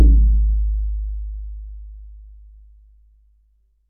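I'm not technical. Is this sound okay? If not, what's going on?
Yes, nothing in this sound stood out as a problem when I listened to it.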